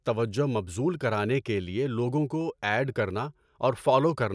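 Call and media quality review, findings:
No faults found in recording.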